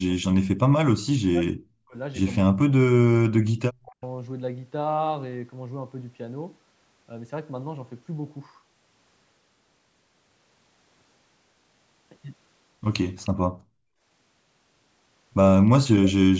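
Speech suppressed in double talk hits the opening of this speech recording at 0.00–0.57 s, 0.87–1.96 s, 2.50–3.11 s and 3.64–4.04 s. The voice sinks by as much as roughly 40 dB in pieces, most likely because an echo canceller mistook overlapping far-end talk for echo and turned everything down. Echo leak appears at 3.57–3.62 s and again at 13.24–13.30 s as brief, faint scraps of a copy trailing the voice by 309 ms, some 25 to 30 dB below it. This is probably loudspeaker sound the canceller failed to subtract. Background gated by the echo canceller follows at 13.39–13.75 s. The room tone drops by about 40 dB for a moment while the canceller clamps the microphone during loudspeaker playback, then comes back when it releases.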